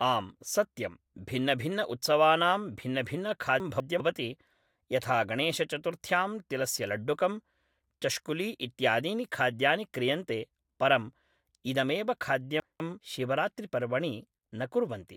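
At 3.6 to 4.0 s, the speech jumbles briefly. These are chunks out of order. Two 200 ms pieces play swapped, because one arrived a chunk late and was played after its successor. Nothing is missing. The sequence is wrong, with three hard joins at the seams. The same fault returns at 12.6 to 13.0 s, with the same 200 ms swap and the same garbled moment.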